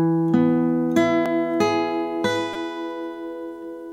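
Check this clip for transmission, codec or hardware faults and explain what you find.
Two repeated-buffer faults occur, at 1.26 s and from 2.53 to 2.55 s. Each time, new audio arrived late, so the output replayed its last short block, which fits a buffer of about 5 ms. At 1.26 s the block plays twice, giving a single click. At 2.53 s it plays five times, giving a brief buzz at roughly 200 Hz. No audio seems to be lost, only delayed. A waveform shows identical 5 ms segments with hard joins, and a spectrogram shows vertical lines at each join.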